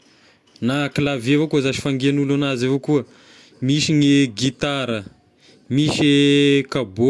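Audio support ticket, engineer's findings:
No audio faults found in this speech clip; nothing for the engineer's findings.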